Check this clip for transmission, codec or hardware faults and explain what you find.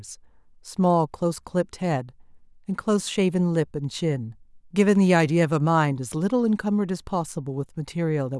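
Nothing in this speech clip suggests a transmission, codec or hardware problem, so there's nothing here to flag.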